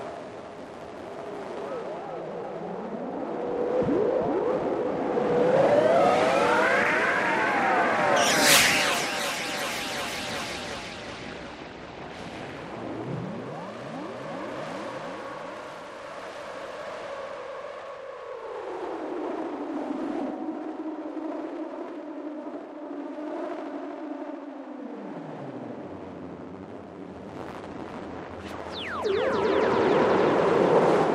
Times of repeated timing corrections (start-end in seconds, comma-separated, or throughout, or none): none